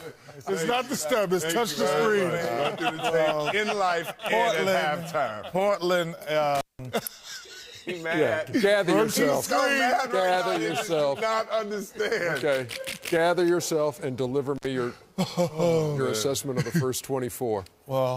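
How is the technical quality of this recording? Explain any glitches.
The recording has two dropouts from an intermittent contact. Around 6.55 to 6.85 s and 14.56 to 14.66 s, a loose connection briefly opens for about 182 ms and 68 ms, cutting the sound with crackle at each edge.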